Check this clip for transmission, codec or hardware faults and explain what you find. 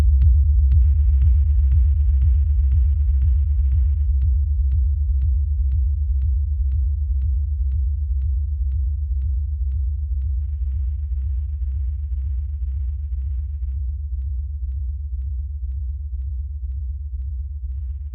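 A Bluetooth SBC bit pool drop occurs three times: 0.81 to 4.06 s, 10.41 to 13.76 s, and 17.74 s to the end. A congested link apparently forced the encoder down, fitting a fall from bit pool 28 to 8 (about 72 kbps), so the treble dulls and gritty quantisation noise rises.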